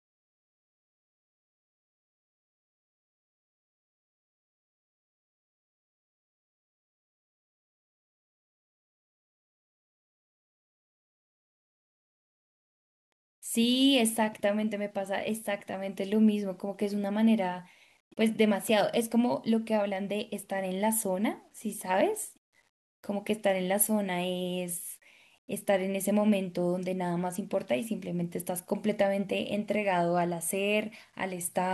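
Throughout the speech there is a grainy, signal-following distortion that rises and falls with the level instead of sitting as a steady hiss. Quiet syllables and decays turn gritty, and the softest tails break into a sputter or drop out to silence. The likely cause is low bit depth without dither: samples rounded to roughly 9 bits, leaving error around 45 dB below the signal that tracks the waveform.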